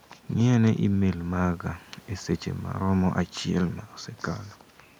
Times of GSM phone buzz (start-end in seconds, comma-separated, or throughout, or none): none